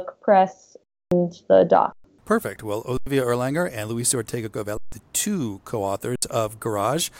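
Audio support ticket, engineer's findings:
Underrun with held sample, five dropouts in the speech: 0.84–1.12 s, 1.92–2.04 s, 2.97–3.07 s, 4.77–4.92 s (before "the two co"), 6.16–6.22 s (after "the two co"). Output buffer starved, so the DAC held its last value. Waveform shows flat shelves. Spectrogram shows blank columns. Live audio lost each time, roughly 0.07–0.3 s. The 2.97 s gap fits a 4096-sample buffer.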